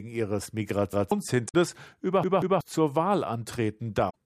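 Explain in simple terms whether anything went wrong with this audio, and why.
A couple of things went wrong here, and they come in two kinds.

First, a repeated buffer, twice. Around 0.93 to 1.12 s the speech stutters: a chunk of roughly 0.19 s plays once, then plays again with a hard join. At 2.24 to 2.61 s the same happens, but that chunk repeats twice. Fresh audio wasn't ready in time, so the player reused what it had, and real speech got skipped, about a fifth of a second the first time and nearly half a second the second.

Second, damaged data in a compressed stream, at 1.45 to 1.54 s and again at 4.06 to 4.16 s. Each is a quick blip or squawk lasting under a tenth of a second. Part of the compressed file was corrupted there, so the decoder briefly misread it and had to hunt for its place again before carrying on.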